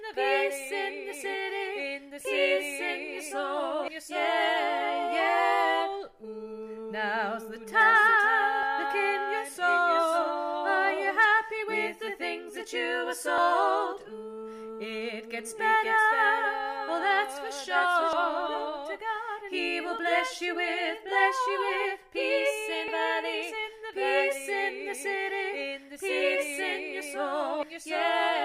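Six abrupt skips fall at 3.88, 8.63, 13.38, 18.13, 22.88 and 27.63 s, evenly spaced. Each is likely audio missing between chunks: roughly a third of a second vanishes at every handover, and the two sides are butted together. This leaves a hard vertical seam in the spectrogram and waveform.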